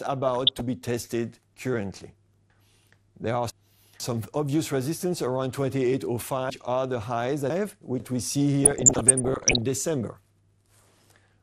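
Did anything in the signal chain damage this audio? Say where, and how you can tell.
Yes. At the codec stage, the whole clip sounds dull and gurgly; a spectrogram shows upper sub-bands flickering off. This is likely MP2 compression at about 80 kbps.

DAB burbling from reception errors at 0.35–0.61 s and 8.65–9.62 s shows as isolated sub-band blocks jumping in level frame by frame.

Chunks out of order at 2.5–4.0 s and 6.5–8.0 s come from buffering or storage: 500 ms blocks play two places late, with three hard waveform joins each time.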